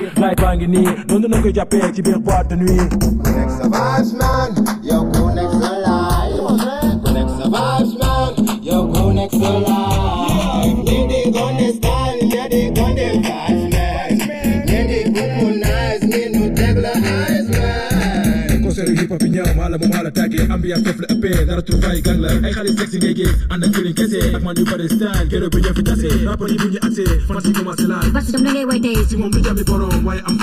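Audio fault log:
throughout, channels drifting apart: the left and right sides sit on separate clocks about 20 ppm apart, so the gap between them slides out to under a millisecond by the end. Fold it to mono and the comb notches creep slowly through the spectrum, giving a slow flanging swirl.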